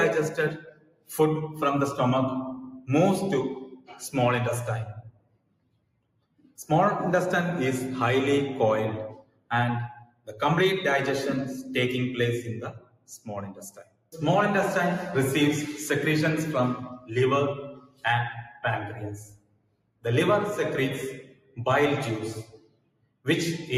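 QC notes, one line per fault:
Throughout: noise suppressor applied to music or sounds. A speech-oriented noise suppressor stayed active on non-speech audio. It treats sustained, steady content as background noise and attenuates it, while sharp onsets pass largely intact. Its gain keeps shifting by roughly 20 dB as it decides what to keep, so the level pumps and flutters, sustained passages thin out, and ambience and tails keep slipping away beneath the attacks.
0.3–1.1 s, 2.71–6.64 s, 9.1–10.41 s, 12.71–14.16 s, 16.9–20.05 s, 21.22–23.27 s: sound cut by the noise suppressor. In these six spans the suppressor judged held or decaying sound to be noise and pulled it down by as much as about 21 dB. Only part of each span is hit, from under a second to about two seconds. Sustains sink in level and decays are cut short, while sudden transients still come through at near-normal level.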